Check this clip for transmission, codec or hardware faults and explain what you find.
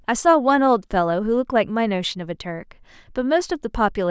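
Nothing turns up here: the speech comes through steady and intact, with no transmission, codec or hardware trouble to point to.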